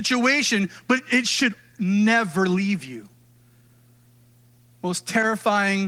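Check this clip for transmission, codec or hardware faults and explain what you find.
Checking the clip turns up no faults to explain.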